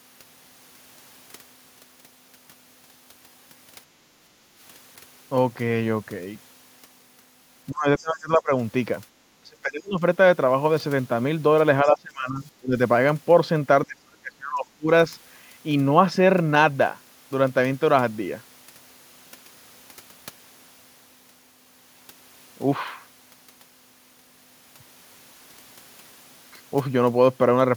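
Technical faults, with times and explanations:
4.30–4.54 s, background gated by the echo canceller: the room tone sinks by about 6 dB for roughly a fifth of a second, then comes back. The canceller clamped the microphone while the loudspeaker played. Only the background dips; no speech is cut, unlike the double-talk drops below.
7.70–8.51 s, 9.41–10.02 s, 11.84–12.76 s and 13.86–14.90 s, speech suppressed in double talk: the talker's own speech is pushed down by roughly 25 to 35 dB for half a second to a second each time. The likely cause is the echo canceller mistaking overlapping talk for echo. The speech itself dips, not just the background.
7.98–8.03 s and 11.85–11.89 s, other side's voice leaking through: a brief, faint scrap of a second voice, roughly 30 dB below the main speech, slips in during two suppressed stretches. It is likely residual loudspeaker echo the canceller missed. 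Something extra is added rather than removed.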